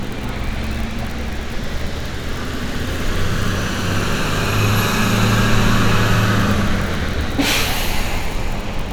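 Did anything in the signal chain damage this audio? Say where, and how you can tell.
No, nothing in the signal chain has audibly damaged this recording of sounds. At no stage, from capture through to playback, is there any sign of a problem.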